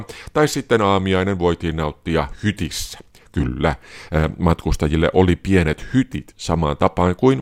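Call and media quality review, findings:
No faults turned up on this one; nothing audible in the speech needs a ticket.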